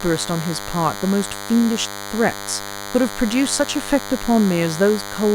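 DECT cordless phone buzz runs through the whole speech clip: a thin, steady 100 Hz buzz rich in harmonics, roughly 10 dB below the speech. A nearby DECT handset or base transmits a radio burst every 10 ms, which the audio circuitry rectifies into sound.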